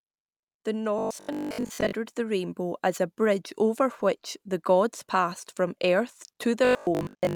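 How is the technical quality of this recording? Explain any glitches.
The recording has two stretches of robotic sound from repeated short buffers, at 0.99 to 1.93 s and 6.65 to 7.35 s. The speech turns into a rigid, metallic 50 Hz buzz that still roughly tracks the words. The likely cause is audio arriving too seldom, with most of it skipped and a 20 ms block replayed in its place. Unlike a plain dropout, the sound never goes silent.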